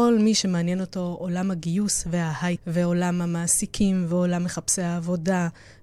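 At 2.52 to 2.58 s the speech passes through damaged data in the compressed stream: corrupted bytes make the decoder misread those frames and lose sync while it hunts for the next valid header, so the sound breaks into a brief glitch lasting about 56 ms.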